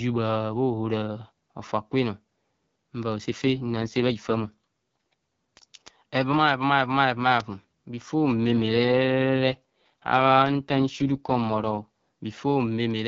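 AMR rate drop at 3.3 to 5.13 s and again at 8.35 to 11.86 s: the speech turns raspy and synthetic while keeping its full band with no gap. This fits the link forcing the codec down from about 12.65 to 6.6 kbit/s before recovering.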